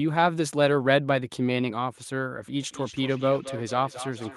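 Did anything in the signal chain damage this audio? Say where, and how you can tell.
Yes. From 2.63 s to the end of the speech, each syllable comes back at a steady interval of about a fifth of a second, and every return sounds thinner and more ringing, peaking about 14 dB below the direct speech. This is feedback echo between two devices, a call-processing fault: a second device in the room replays the audio, and this microphone picks it up again. Each device's echo canceller removes only its own playback, so the loop survives.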